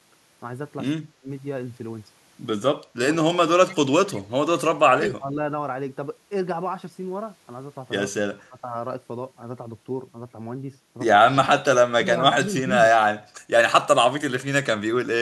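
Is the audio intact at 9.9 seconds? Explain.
Yes, the audio is intact at 9.9 seconds, with no fault audible at that moment.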